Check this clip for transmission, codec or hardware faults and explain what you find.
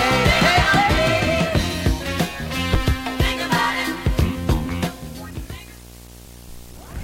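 Two faults are present. One runs through the whole clip, and one is brief, near the end.

Video or display buzz is present throughout. A screen or video cable is coupling into the audio. It adds a 60 Hz buzz with hash above it, about 20 dB below the signal.

Compressed frames skipped at 6.25 s. About one frame of audio is missing, so the sound jumps ahead. That fits a frame of about 23 ms.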